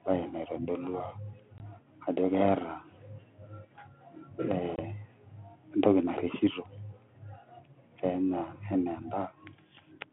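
At 1.58 s and again at 4.76 s the speech breaks into a hard-edged silence of about 20 ms, roughly one packet, from packet loss on an ADPCM call. Unlike a plain dropout, each gap ends with speech returning slightly distorted while the decoder's predictor and step size resynchronise.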